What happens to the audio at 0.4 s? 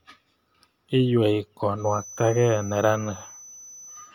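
Nothing goes wrong at 0.4 s; the speech there is intact, with no dropout, click, distortion or other fault.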